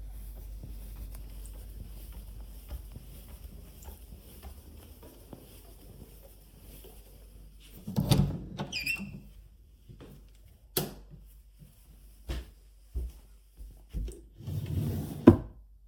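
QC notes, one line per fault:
8.67–15.67 s, periodic USB or driver dropouts: a short tick recurs every 0.5 s, about fifteen in all, and each falls only where sound is present. Something appears to stall the USB bus or audio driver on a fixed cycle, so a fraction of a millisecond of audio is skipped outright rather than filled with silence. The waveform jumps across the gap, and that discontinuity is what produces the regular click.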